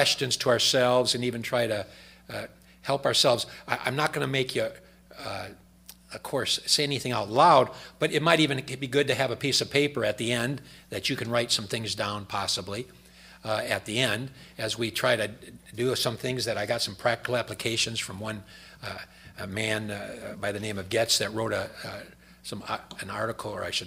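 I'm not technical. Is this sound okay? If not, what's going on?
Yes, this sound is okay. Nothing in it points to a technical problem.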